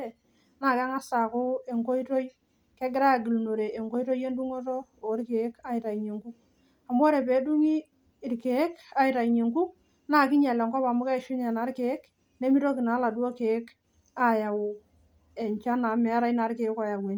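Throughout, the speech has likely passed through Bluetooth LC3 compression at what sounds like a 48 kbps stream, leaving a plainly audible breathy, grainy edge on the voice.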